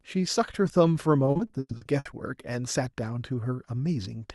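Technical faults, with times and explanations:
1.25–2.07 s, repeated packet loss (robotic sound): the speech turns choppy, with pieces dropping out. Nine gaps, the longest 100 ms, each patched by stretching the last sound, so about 340 ms, roughly 41% of this stretch, is concealment instead of real audio.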